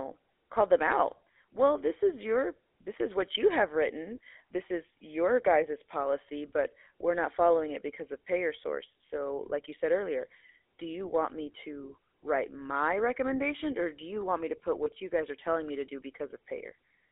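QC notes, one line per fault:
Throughout, GSM full-rate codec. The speech sounds plainly buzzy and gravelly. The band runs only from 300 Hz to 3.5 kHz, which fits a 13 kbps pulse-excited coder.
14.84 to 14.91 s, lost GSM frames. After "want me to put", a gap that fits one 20 ms frame is patched by repeating the last good one. It gives a brief metallic ring before "you guys are telling".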